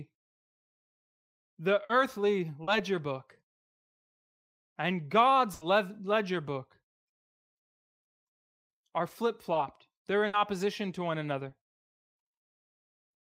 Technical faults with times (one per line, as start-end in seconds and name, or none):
1.85-1.91 short concealed packet loss
2.63-2.69 short concealed packet loss
5.53-5.63 burst of packet loss
9.53-9.57 short concealed packet loss
10.27-10.35 burst of packet loss
11.49-11.53 short concealed packet loss